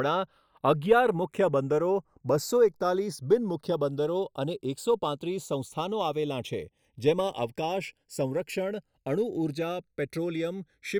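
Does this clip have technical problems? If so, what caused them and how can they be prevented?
Yes. Channels drifting apart throughout: two clocks roughly 40 ppm off slide the delay to about half a millisecond, sweeping comb notches like slow flanging. Lock both devices to one word clock.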